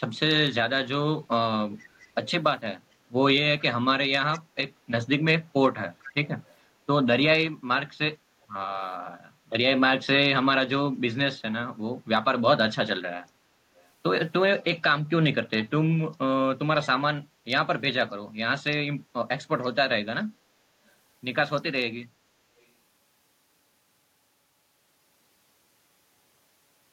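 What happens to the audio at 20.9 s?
From 20.87 to 20.91 s there is a brief echo leak. A very faint copy of the speech returns 444 ms late, likely from a far-end canceller missing loudspeaker pickup.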